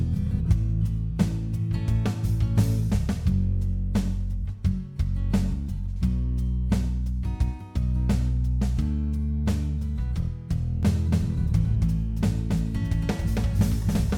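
A second, slower capture path likely feeds the same audio back in from 10.83 s to the end, producing a doubled audio track: a full-band copy trails the original by around a third of a second, a few decibels quieter, undecayed, cutting in abruptly.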